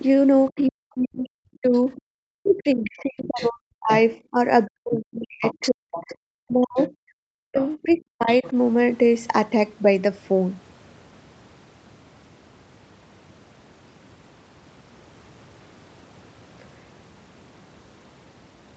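From 0.5 to 8.54 s there's speech suppressed in double talk: both ends talking at once, and the echo canceller likely couldn't tell the talker from loudspeaker echo, so it ducked everything. The voice dips and breaks up for roughly five seconds in total, sometimes by about 40 dB.

Inside that stretch you can also hear the other side's voice leaking through, likely residual echo the canceller didn't remove. It comes in at 2.46 to 3.97 s and 4.94 to 6.15 s, about 15 dB under the talker, then briefly at 6.77 to 6.90 s and 7.57 to 8.49 s, about 20 dB down.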